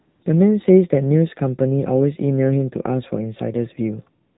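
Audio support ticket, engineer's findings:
AMR narrowband mobile codec across the whole clip. Band stops at 4 kHz. Buzzy, synthetic speech. Plainly audible codec damage fits a low mode near 7.4 kbps.

AMR comfort noise at 0 to 0.22 s and 4.28 s to end. Smooth steady hiss replaces the real background. The receiver fills the silence with generated noise while no speech frames are sent.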